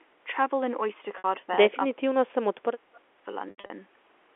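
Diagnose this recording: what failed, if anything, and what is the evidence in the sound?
Packet loss with pitch repetition, network stage: at 1.18 to 1.24 s, 60 ms goes missing, which fits three 20 ms packets, and the gap is bridged by a held, buzzy repeat of the last pitch period. At 3.5 to 3.7 s, 160 ms is lost in scattered bursts, the longest run 80 ms, giving repeated buzz and fade-outs.

Speech suppressed in double talk, call-processing stage: the talker dips by about 5 dB at 1.36 to 1.49 s. From 1.71 to 3.27 s, roughly 1.5 s is pushed down as much as about 35 dB. This is likely the echo canceller attenuating during simultaneous talk.

Echo leak, call-processing stage: at 2.94 to 3.0 s a faint delayed copy of the voice arrives about 250 ms late, roughly 35 dB below the speech, during the G.711 telephone-band call. The likely cause is a loudspeaker-side echo canceller letting residual microphone pickup through.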